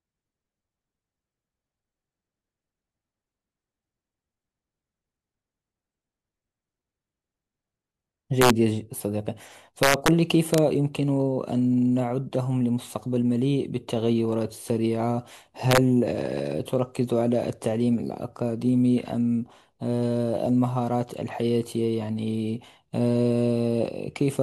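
A speech clip with integer overflow on its loudest moments. Violent cracks break out at 8.42 to 8.50 s, 9.83 to 10.08 s, 10.54 to 10.58 s and 15.71 to 15.78 s. At those peaks the level pushes past the largest integer value, by up to about 2 dB, or just reaches it. Instead of being held at the limit, the samples wrap to the opposite sign. Each peak snaps across the full range, which sounds far harsher than clipping.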